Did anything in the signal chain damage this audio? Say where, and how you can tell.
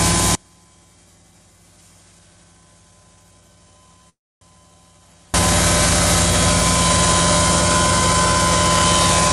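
Yes. From 0.35 s to 5.34 s the sound abruptly drops to a faint residue, roughly 35 dB below normal, then snaps back. This audio dropout to a faint residue is likely a break in the analogue wiring or connection while the downstream path stayed live.

Inside that gap, from 4.09 s to 4.43 s, a call audio freeze stretches the last sound into a brief fading buzz or hiss, then about 270 ms of silence. Delayed network packets likely emptied the jitter buffer, inserting 318 ms of delay without losing any audio.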